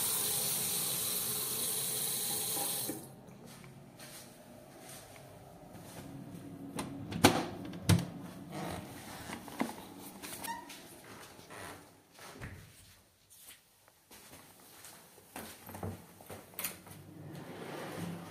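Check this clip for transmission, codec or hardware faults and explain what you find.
One fault is present: a single underrun with held sample at 16.69 s. The output buffer briefly ran dry, and the converter held its last output value for about 0.48 ms before data resumed. The waveform sits flat for that instant. Because a fraction of a millisecond of live audio was dropped rather than paused, the return to signal lands at a different point in the waveform.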